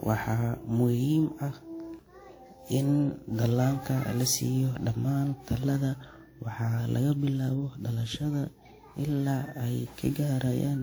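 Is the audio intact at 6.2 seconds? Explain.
No, the speech at 6.2 seconds carries generation loss throughout: likely repeated lossy re-encoding, about ten passes, which fits a WMA-type codec near 96 kbit/s, leaving swirly, hollow sound with smeared attacks.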